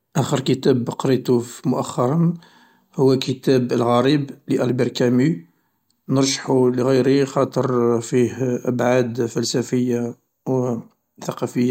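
No technical faults can be heard anywhere in this speech recording. There is nothing to place on a timeline.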